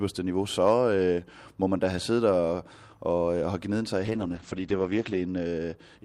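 At 4.06 s, just after "have gnidet sig i", a call bitrate drop sets in and lasts until 5.81 s. The audio bandwidth collapses from 20 kHz to 8 kHz, so the speech turns muffled and coarse, with a rough, watery texture. That degradation fits the encoder being pushed from about 64 kbps down to roughly 10 kbps after the bandwidth estimate fell. The worst stretch holds for about 1.2 s before quality recovers.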